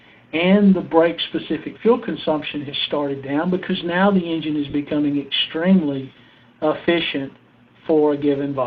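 A brief smeared, noisy patch at 4.70 to 4.73 s, about 30 ms long, briefly blurs the sound into a hiss-like texture where the detail should be, with light perceptual coding adding at most a faint watery texture on noise and attacks. This is lost LE Audio frames: a short run of Bluetooth LE Audio data, fitting about four frames, never arrived, and the LC3 decoder concealed the gap by replaying the last good spectrum with randomised signs, so tonal content turns into noise.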